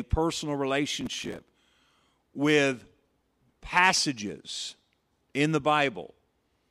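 A speech clip with processor overload crackle from 1.01 to 1.43 s: a burst of gritty tearing as dozens of short buffers, around 5 ms each, miss their deadlines and replay stale audio. The waveform shows hard-edged repeated chunks; the spectrogram shows dense vertical broadband streaks.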